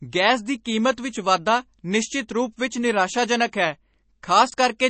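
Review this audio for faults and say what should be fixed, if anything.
The whole recording has a watery, swirly quality, and the codec damage is plainly audible. Nothing comes through above about 8.3 kHz, so the top end is cut flat. That is likely MP3 compression at a low bitrate, which fits something around 32 kbps. At that rate the encoder runs out of bits and drops the weaker frequency lines, and they flicker on and off from frame to frame. To prevent it, keep a lossless master and only encode to MP3 at a much higher bitrate, if at all.

Right near the end, from 4.5 to 4.54 s, there's a brief jumbled moment where chunks play out of order. One 20 ms chunk lands one chunk late, after the piece that should follow it. No audio is actually missing, but the sequence is scrambled and there are three hard joins in that short stretch. To prevent it, make sure the buffering or writing path keeps chunks strictly in sequence, for example by reordering on sequence numbers before playback or saving.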